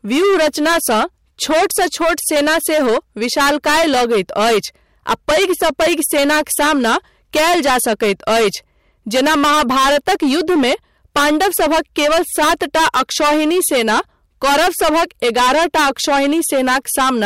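Hard clipping runs through the whole speech clip. The signal is driven about 19 dB past what the stage can pass, so nearly a third of the samples are cut flat, giving harsh fuzz on every loud syllable rather than the rounder, gentler thickening of soft saturation.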